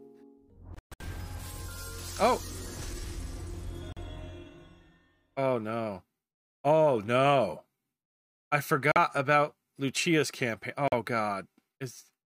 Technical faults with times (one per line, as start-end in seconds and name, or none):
0.75-1.02 Bluetooth dropout
3.92-3.98 Bluetooth dropout
8.92-8.97 Bluetooth dropout
10.88-10.93 Bluetooth dropout